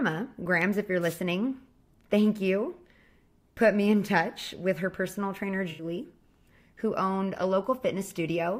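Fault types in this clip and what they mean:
Wireless microphone noise hit: the radio link from an analogue FM microphone dipped as reflected signal paths cancelled at the receiver, letting receiver noise rise over the speech. Here it appears as a brief swish of static from 1.01 to 1.18 s, roughly 170 ms long, before the carrier recovers.
AAC frame loss with concealment: a short run of AAC frames failed to arrive and the decoder filled the gap by extrapolating from the last good spectrum instead of outputting silence. From 5.70 to 5.84 s the speech is briefly filled in by concealment rather than dropping out, a gap of about 85 ms that fits four lost frames of 1024 samples at 48 kHz, after which normal decoding resumes.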